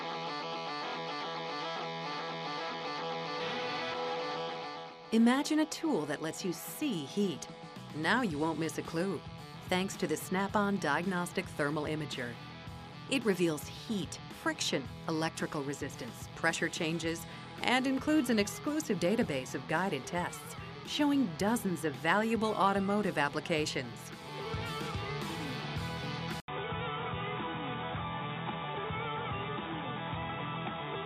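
At 26.4 s the audio drops out for about 80 ms, then comes back dull and boxy, with nothing above 3.8 kHz, and it stays that way to the end. The loudness is roughly unchanged, but a faint new background noise sits well beneath the sound. This points to the input having likely switched to a poorer device: recording jumped to another microphone or a headset's call profile, whose narrower band and own noise floor replaced the original pickup.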